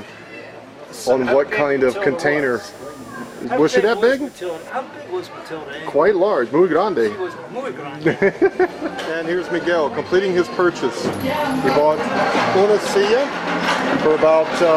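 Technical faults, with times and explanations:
2.39–4.69 s, computer activity noise: a buzzy, chirping pulse near a few hundred hertz sits well below the main sound and then stops, unrelated to the audio itself. Shifting processor or graphics load disturbs the ground shared with the audio circuit, leaking that activity in.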